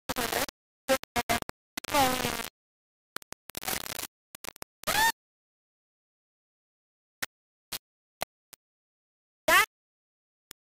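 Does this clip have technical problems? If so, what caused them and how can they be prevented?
Yes. The whole clip sounds coarse and grainy, with a gritty distortion that moves along with the sound. That's the signature of low bit depth without dither, likely a reduction to something like 3 bits with plain rounding. At that resolution the error is roughly as loud as the sound itself. To prevent it, keep a higher bit depth and add dither whenever you have to reduce it.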